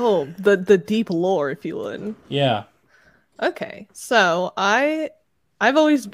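No technical faults can be heard anywhere in this recording.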